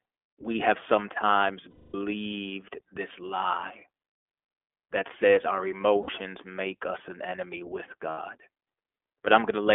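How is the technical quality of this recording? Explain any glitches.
The quality is limited: the whole clip has passed through a narrowband voice codec, and there are three short dropouts.

The iLBC codec is present throughout. It confines the speech to a telephone band of roughly 300 Hz to 3.4 kHz. Each short frame, 20 ms here, which fits iLBC's 15.2 kbps mode, is coded on its own, leaving plainly audible roughness and a slightly synthetic edge. On a spectrogram, all energy stops sharply at 3.4 kHz, with an empty region above and very little below 300 Hz.

There are lost iLBC frames at 1.70 to 1.96 s (240 ms, after "we have sometimes"), 6.02 to 6.10 s (60 ms, between "that says our" and "make us an enemy") and 8.10 to 8.20 s (80 ms, after "us an enemy with"). In each gap the decoder repeats the last pitch cycle blended with noise, so it sounds like a held, buzzy vowel. The 240 ms gap fades. 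A spectrogram shows flat, unchanging harmonic bands and a smeared noise floor. The waveform shows a repeating periodic pattern that shrinks, and the speech returns almost immediately afterwards.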